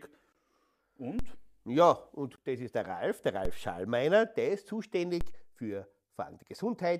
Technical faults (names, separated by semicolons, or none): DC step